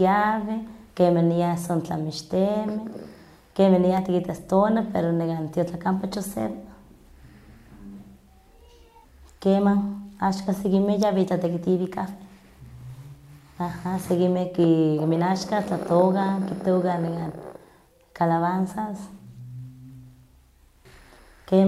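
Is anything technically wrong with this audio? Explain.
Yes. At 3.97 s and 11.03 s, an electrical switching spike adds a sharp snap over the speech, the second louder. It is likely a nearby switch arcing into the line. Unlike a dropout, the sound underneath continues uninterrupted.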